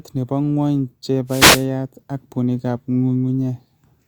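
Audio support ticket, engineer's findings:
Wireless microphone noise hit, 1.27–1.66 s, roughly 0.38 s, ending just before "ak puunigap". Symptom: short swish of static rising over the speech, then clearing. Probable component: analogue FM radio link, transmitter to receiver.

Mechanism: RF multipath. Reflected signal paths partially cancel the direct one, the carrier level drops, and receiver noise rises into the audio until the signal recovers. Check antenna placement, line of sight, and diversity reception.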